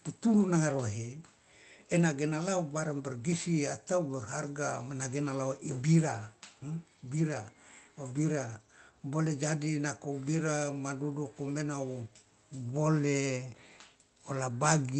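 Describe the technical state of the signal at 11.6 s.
At 11.6 s the speech is intact, with no dropout, glitch or distortion, only the band-limited character of the call path it travelled through.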